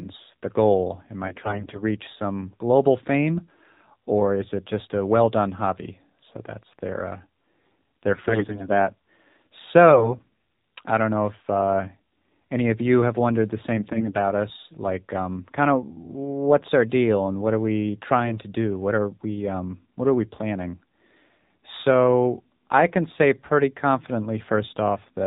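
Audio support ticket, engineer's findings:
AMR narrowband mobile codec, throughout: buzzy, synthetic speech. Spectrogram shows a hard ceiling at 4 kHz and smeared harmonics. The sound fits low-rate AMR-NB, around 7.4 kbps.

AMR bit errors at 1.26–1.81 s (before "reach some global fame"), 8.14–8.71 s, 9.90–10.17 s, and 13.78–14.16 s (between "you have wondered the" and "us like um kind"). Hoarse, gargly bursts with pitch and level held. Corrupted bits misplace the excitation pulses. Spectrogram shows ragged, noisy harmonics. Waveform envelope is intact.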